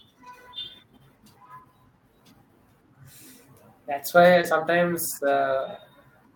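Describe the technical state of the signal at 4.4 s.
At 4.41 to 4.45 s the speech has a short concealed packet loss: about 20 ms of audio failed to arrive, and the receiver covered roughly 17 ms of it by extending the preceding sound, pitched if voiced and shaped noise if not, before crossfading back. It is heard as a quick smear or wobble. On a spectrogram the harmonics run on flat and slightly blurred for that sliver; the waveform shows a repetitive, smoothly decaying stretch instead of natural variation.

Overlapping the end of that gap, 4.43 to 4.45 s, one packet was a lost packet rebuilt from error correction: the following packet carried a low-bitrate duplicate, which the decoder played for about 20 ms, so nothing drops out. That frame comes through rougher and noisier than its neighbours. A spectrogram shows a grainier, less clearly defined patch with weaker harmonic detail, and the waveform looks slightly fuzzier but continuous, with no gap.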